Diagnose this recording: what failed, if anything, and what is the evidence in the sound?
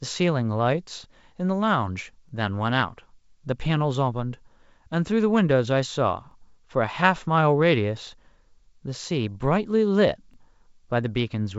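Overlapping chunks at the buffer or chunking stage of the speech path. Short stutters fall at 2.29–2.31 s, 6.31–6.34 s and 10.34–10.36 s, about 4.0 s apart. At each one, about 23 ms of audio plays twice. Each 4.0 s block begins slightly before the previous one ends, so the joins repeat a sliver of material instead of butting cleanly. The G.722 wideband coding underneath sounds clean, consistent with its 64 kbit/s mode.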